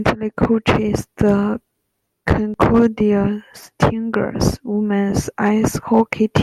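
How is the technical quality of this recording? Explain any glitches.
The recording has one clear fault, present throughout. Hard clipping runs across the whole speech clip: the loudest peaks carry a brief crackle and edge. The level is pushed about 5 dB beyond what the stage can pass, so under one percent of samples have their tops cut flat, adding harsh high harmonics.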